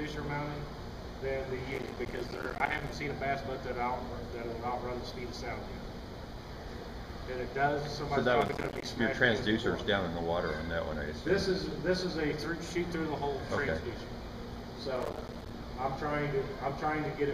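Processor overload crackle occurs from 1.71 to 2.95 s, again from 8.41 to 8.86 s, and from 14.97 to 15.51 s. In each stretch the processor repeatedly failed to finish its small audio buffers in time, which fits buffers of around 5 ms. Each missed buffer left a short hard-edged gap of silence. Many such dropouts in quick succession produce a gritty, tearing crackle over the sound, longest in the first burst, that stops once the load eases.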